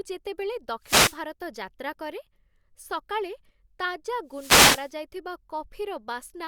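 It's a speech clip with two wireless microphone noise hits, from 0.81 to 1.20 s and again from 4.28 to 4.93 s. Each time the FM radio link fades as reflected signals cancel, receiver noise swells up as a swish of static.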